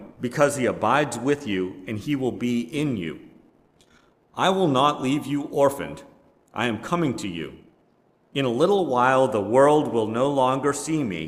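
No technical faults are audible.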